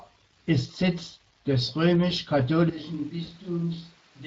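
Speex codec damage runs through the whole recording. Too few bits go to the CELP excitation, so the speech sounds noisy and hoarse throughout, with a plainly audible coded quality that fits a mid-range setting of around 20 kbps.

At 2.70 s the sound changes abruptly and stays that way to the end. It turns roomy and hollow, loses bass, drops about 10 dB in level, and carries background noise roughly 25 dB below the speech. This is likely a switch to a distant microphone after the close one dropped out.

VoIP packet loss concealed by the speech codec follows from 3.25 to 3.30 s. The decoder fills the gap by extrapolating its last pitch and filter with falling gain, leaving a brief stretched sound that fades. The effect fits a single lost 20 ms frame, and the speech stays weakened briefly after the gap.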